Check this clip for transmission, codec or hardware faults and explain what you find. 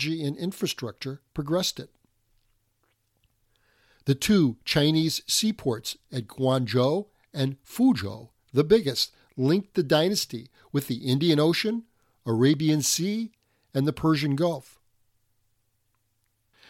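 No faults can be heard anywhere in this speech.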